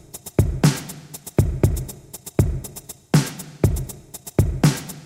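No technical faults can be heard anywhere in this recording of sounds; the signal stays continuous and intact throughout.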